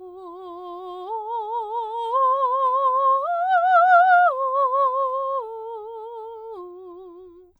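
From 0.24 s to 7.52 s the music carries clock slip clicks: faint, evenly spaced ticks about every third of a second, some thirty in all, most audible on loud or sustained passages. The likely cause is two devices running on independent clocks with no synchronisation, differing by something like 70 ppm, so one sample is dropped or repeated each time the drift reaches a whole sample, giving a steady tick rate.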